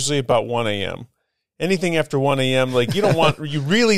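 A speech clip with clock drift buffer slips. A short click is heard once a second, from 0.31 s to 3.31 s, about four in all. The steady spacing is the giveaway. The likely cause is two devices running on separate clocks that disagree by several hundred parts per million. The buffer between them drifts until a block of a few dozen samples is dropped or repeated. Each slip breaks the waveform and clicks.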